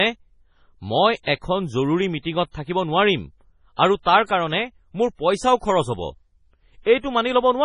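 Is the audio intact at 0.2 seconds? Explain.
No. MP3 compression runs through the whole clip, including 0.2 s. Nothing survives above 10.4 kHz, and weak frequency content flickers frame to frame, giving a watery, swirly sound, likely from a very low bitrate.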